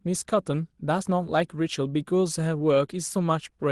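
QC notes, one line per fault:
No faults are audible in this speech clip. The call path carries the sound as expected, with the top end stopping near 12 kHz, which fits an Opus call codec.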